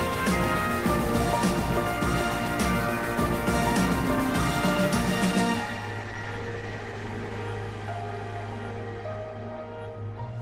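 From 6.02 s to 7.51 s there is a call bitrate drop. The bandwidth estimate fell, so the encoder coded the audio with far fewer bits. The sound turns rough and dull. That fits a fall from 32 to 17 kbps, held for about 1.4 s.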